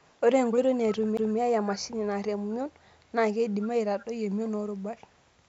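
From 0.00 to 0.17 s a faint delayed copy of the speech trails 219 ms behind, about 40 dB down. This echo leak is likely a loudspeaker echo canceller letting residue through, and on a spectrogram it shows as weak, shifted duplicates of the speech harmonics. At 1.17 s a CD skip cuts in: a very brief mute and tick, then the speech resumes from a different point. The waveform shows a tiny gap and a discontinuity. The echo returns at 2.83 to 2.88 s (about 40 dB down), 3.60 to 3.69 s (about 20 dB down) and 4.00 to 4.06 s (about 25 dB down), again 219 ms late and most audible at 3.60 s.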